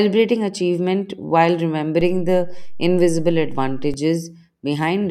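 At 2.01 s there's a DC step: the whole waveform's zero line suddenly jumps to an offset of about -23 dBFS, the kind of shift you get when a converter recalibrates or an offset input gets switched in. The speech rides on top of it unchanged, but the jump itself comes through as a low thump. The offset holds until 3.94 s, when it steps back to zero, giving you a second thump there.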